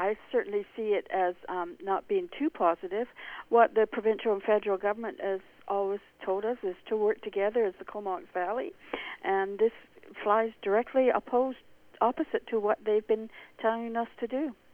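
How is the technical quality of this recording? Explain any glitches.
Nothing stood out on listening; I heard no glitches in the recording that would need explaining.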